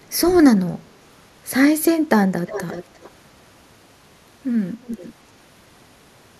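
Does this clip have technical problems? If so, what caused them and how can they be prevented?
Yes, there's an echo leak at 2.47–3.1 s and 4.82–5.13 s: a faint copy of the speech trailing 351 ms behind, roughly 15 dB down. Likely a speakerphone whose echo canceller let mic pickup through. Headphones or stronger echo cancellation would prevent it.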